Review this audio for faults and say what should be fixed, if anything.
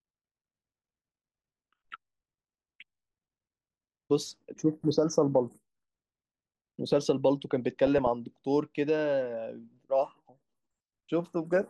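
DAB burbling at 7.87 to 8.07 s: a short burst of burbling runs over the speech as bit errors slip past error correction into the MP2 data. This corrupts samples, putting short blips of noise in single sub-bands, and scale factors, making individual sub-bands jump in level for up to a frame. Preventing it requires a stronger, cleaner DAB signal through a better antenna or placement.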